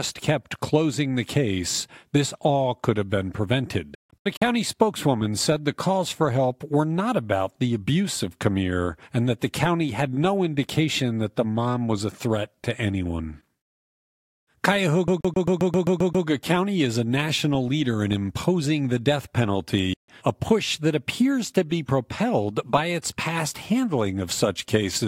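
From 3.95 to 4.42 s the speech breaks into several short silences just before "spokeswoman said the calls": about 0.28 s is missing in total, spread over roughly 0.46 s, with the longest gap near 0.15 s. This is likely a Bluetooth dropout, where packets arrived too late for the headphones and were discarded. The sound picks up further along, as if it had kept playing through the gaps. A waveform shows flat holes, and a spectrogram shows blank vertical strips across all frequencies.

Between 15.08 and 16.27 s the audio sticks in the manner of a CD stuck on one turn. The same 132 ms slice plays nine times in a fast, even stutter, with a brief mute at each jump back. The waveform shows one identical shape tiled at regular intervals, and the spectrogram shows a repeating block pattern with thin gaps at each seam.

At 19.93 s a single silence of about 0.15 s falls between "in imposing the death" and "a push that appears". 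This is likely a second Bluetooth dropout, and the speech resumes further along rather than where it stopped. The waveform drops to silence, and the spectrogram shows one clean vertical gap.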